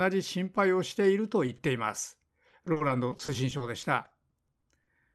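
At 1.47 to 1.49 s and again at 1.57 to 1.59 s, short concealed packet loss occurs: a brief slice of the call arrives too late, and the receiver extends the preceding sound to cover it. Each patch is heard as a quick smear or wobble in the speech.

From 2.48 to 4.88 s, repeated packet loss (robotic sound) sets in. Twenty-one holes, the longest 40 ms, are each papered over by continuing the last sound, about 18 percent of that stretch in all, so the speech turns choppy, thinned by the call path's roughly 12 kHz bandwidth.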